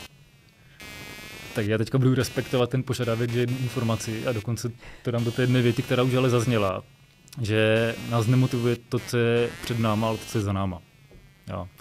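All the way through the speech there's computer activity noise, a buzzy chirp pulsing around 200 times a second and sitting roughly 20 dB under the voice, riding on the computer's load changes through the shared ground.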